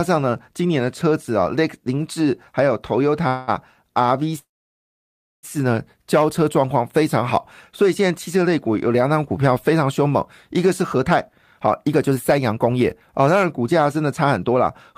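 Packets were likely held up in transit, draining the jitter buffer, and the receiver stretched the last sound to cover the wait. The first call audio freeze runs from 3.27 to 3.50 s: about 0.2 s of fading buzz inserted into the speech. The second, from 4.38 to 5.45 s, fills just over a second, and after a brief tail almost all of it, around 0.98 s, is silence. In both, the speech resumes where it stopped, so little or nothing is lost and only delay is added.

With extra audio then queued, the receiver trimmed repeated pitch-period slices to catch up, causing jitter buffer speed-up. From 10.81 to 11.18 s the speech plays about 15% fast, roughly 70 ms removed. From 11.61 to 14.94 s it runs about 10% fast, with around 0.4 s cut overall. The pitch stays the same, but the delivery sounds rushed.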